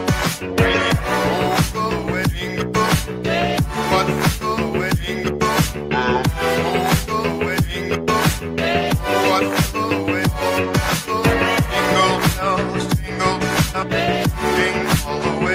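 No technical faults can be heard anywhere in the audio.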